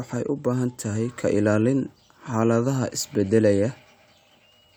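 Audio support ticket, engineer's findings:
No audible faults found.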